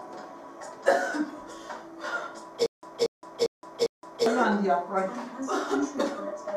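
From 2.66 to 4.26 s, a stutter with silent gaps. A 232 ms burst repeats four times between 169 ms silences. Likely a stalled stream.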